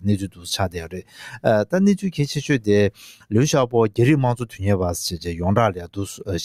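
Across the whole clip the level pumps and thins: sustained parts and decaying tails keep sinking while sharp onsets punch through, giving a fluttering, uneven loudness that swings by roughly 10 dB. This is a noise suppressor applied to music or sounds. A suppressor built for speech stays active and treats steady tones, ambience and reverb as noise, so it keeps turning down anything that holds or fades and lets only attacks pass intact.

The effect deepens into four distinct dips where the sound is cut by the noise suppressor. At 0.23–0.47 s the level drops by about 10 dB. From 0.69–1.45 s comes the longest and deepest cut, about 11 dB. At 2.91–3.33 s and 5.77–5.98 s there are further drops of about 10 dB each. In each dip the sustained or decaying material is treated as noise and pulled under the rest, so its body sinks or its tail is cut short.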